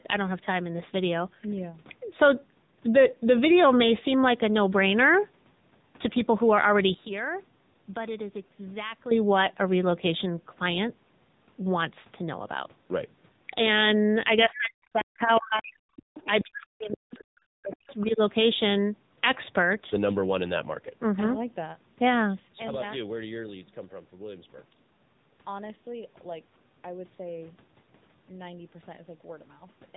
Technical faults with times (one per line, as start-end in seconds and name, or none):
0.00-29.96 AMR narrowband mobile codec
14.48-15.81 speech suppressed in double talk
14.99-15.62 other side's voice leaking through
15.96-17.24 other side's voice leaking through
16.24-17.14 speech suppressed in double talk
17.73-18.11 other side's voice leaking through